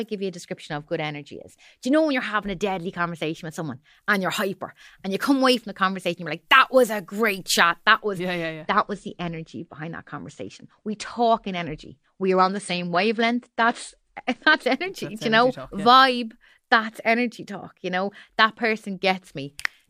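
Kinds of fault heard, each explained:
Pre-emphasis left on: From 3.95 to 7.99 s the speech turns thin, bright and sibilant. The treble boost applied before transmission was never undone by a matching de-emphasis, leaving 10 kHz about 10 dB hotter than 1 kHz, a tilt consistent with a 50 µs FM curve.
Adaptive stream at a lower bitrate: Between 8.63 and 14.63 s the quality drops abruptly, with no gap. Content above 9.8 kHz vanishes and codec artefacts rise, which suggests the player switched to a lower-bitrate rendition, consistent with AAC falling from about 96 to 32 kbit/s.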